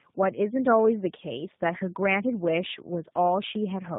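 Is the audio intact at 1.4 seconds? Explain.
No. At 1.4 seconds, like everywhere else in the clip, you're hearing tandem speech coding. The speech went through AMR-NB at 10.2 kbit/s, across a G.711 A-law link, then got re-encoded as G.729A at 8 kbit/s, so two speech codecs stacked on each other. The second coder is working from the first one's already-damaged output, which makes the sound rougher, muffled and warbly. Nothing survives above about 3.8 kHz.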